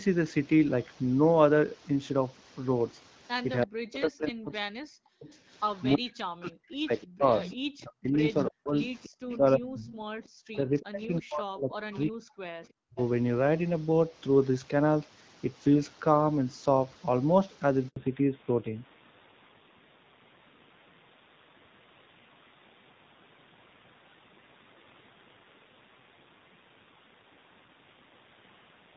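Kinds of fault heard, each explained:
Speech suppressed in double talk: The voice sinks by up to about 40 dB, thinning and breaking into pieces, across 3.65 to 5.33 s, again from 5.96 to 12.32 s, and briefly at 12.85 s. This is likely an echo canceller that heard both ends talking at once, could not tell this talker from its own loudspeaker echo, and turned everything down, costing roughly 1.5 s, then 4 s, then a tenth of a second of speech.
Echo leak: A delayed copy of the voice trails the speech by about 329 ms, in four stretches: 5.78 to 6.11 s at about 35 dB below the speech, 7.02 to 7.56 s at about 15 dB below, 8.48 to 11.04 s at about 20 dB below, and 11.71 to 11.96 s at about 25 dB below. This is likely a loudspeaker on one side whose echo canceller failed to remove all of what its microphone picked up, so part of it was sent back.
Handover gap: At 17.88 s the voice drops out for 80 ms and then resumes. 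The call was passed from one network link to another, and during the switch no speech frames arrived, so that short stretch of sound is simply lost rather than repaired. The break is brief but abrupt, and it marks the exact moment after which the sound of the call changes character.
Fallback to narrowband: From 17.96 s to the end, everything above 4 kHz disappears and the voice turns duller and rougher. After the handover the call left HD Voice, where AMR-WB at 12.65 kbit/s carried a clear wideband sound, and dropped to AMR-NB at 7.4 kbit/s, an older narrowband codec that cannot carry the upper frequencies and codes speech with less detail.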